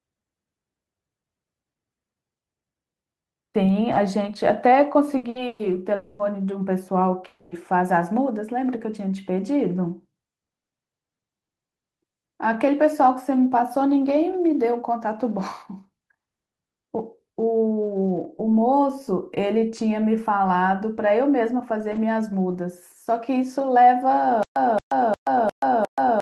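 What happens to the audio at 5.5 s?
A burst of packet loss hits from 5.47 to 5.62 s. About 120 ms is missing. The last sound is held and faded, then the audio jumps ahead.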